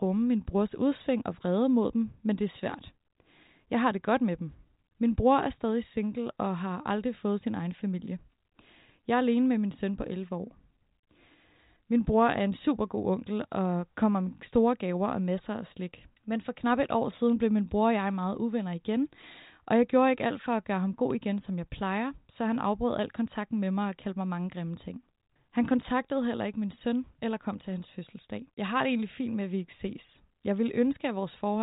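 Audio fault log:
Nothing to flag here, just speech in a telephone-width band that tops out around 3.8 kHz, with no faults turning up anywhere in it.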